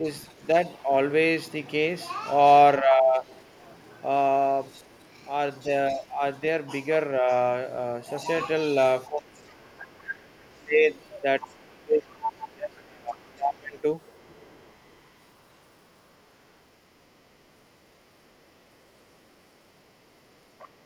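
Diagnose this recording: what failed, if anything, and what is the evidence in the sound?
The speech dips and thins in several stretches: 0.0 to 0.89 s, 2.8 to 3.31 s, 5.64 to 6.22 s, and most severely 9.07 to 13.8 s, where it falls by about 30 dB. This is speech suppressed in double talk at the call-processing stage, likely an echo canceller that could not separate the local talker from the echo and turned both down.

A faint second voice comes through at 0.31 to 0.72 s, 4.64 to 6.05 s, 8.11 to 15.55 s and from 18.25 s to the end. It sits roughly 25 to 40 dB below the main speech. This is the other side's voice leaking through, likely echo from the loudspeaker that the canceller did not fully remove from the microphone.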